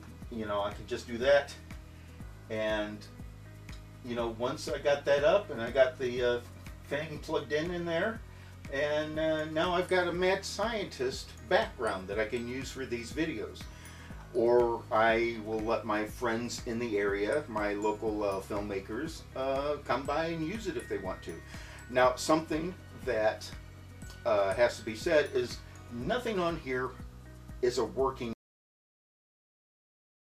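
At 28.33 s the audio has a cut-off end: the final buffers were never written, so the sound stops mid-event and drops straight to digital silence with no decay. The waveform ends at a sharp vertical edge followed by a flat line, and the spectrogram shows a clean vertical boundary into blank black for the last 1.9 s.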